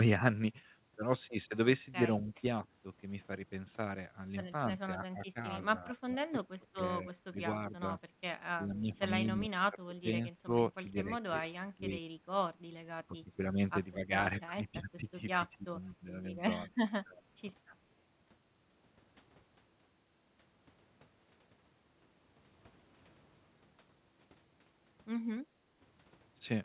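The speech dips at 2.21–2.43 s, 4.97–7.85 s, 8.56–11.91 s, 12.97–13.42 s, 13.96–16.08 s and 16.99–17.31 s. This is likely speech suppressed in double talk. The echo canceller could not tell this talker apart from the loudspeaker echo, so it turned the signal down. The first dip is slight, about 5 dB. The later ones go deeper, reaching about 25 dB. In each of the two longest spans the affected parts add up to around a second and a half.

From 15.84 to 15.91 s, inside one of those dips, a short scrap of the voice comes back about 247 ms late. This is likely an echo leak. The far side plays the call on a loudspeaker, and its canceller left some of that pickup in its microphone signal. That residue was sent back. The copy sits about 35 dB below the speech. It is faint and brief.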